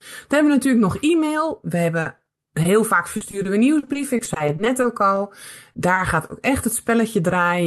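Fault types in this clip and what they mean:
Repeated packet loss (robotic sound): audio keeps dropping out and getting patched from the last sound, so the speech from about 2.0 to 2.7 s and 3.2 to 5.2 s turns choppy and robotic.
Short concealed packet loss: two single brief holes of a few hundredths of a second, at about 5.73 and 5.95 s, each filled in by stretching the preceding sound, heard as a tiny smear or wobble.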